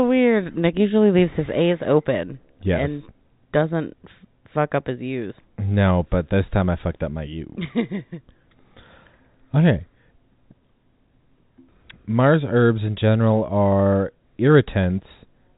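No technical faults can be heard in the speech, which comes over a G.711 telephone path whose band stops at about 3.8 kHz, with at most faint coding damage.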